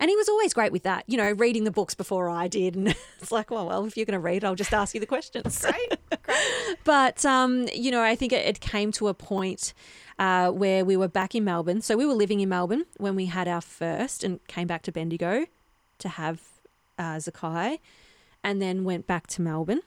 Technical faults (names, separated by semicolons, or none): repeated buffer; timecode bleed